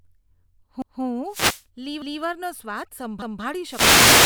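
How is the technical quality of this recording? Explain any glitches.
The recording has two recurring faults. Overlapping chunks appear at 0.82–1.02 s, 2.02–2.22 s and 3.22–3.42 s: each 1.0 s chunk starts 200 ms early, so that stretch of speech repeats, heard as a regular stutter. Wireless microphone noise hits occur at 1.25–1.65 s and from 3.61 s to the end: fading in the radio link lets receiver noise rise, giving a burst of static over the voice.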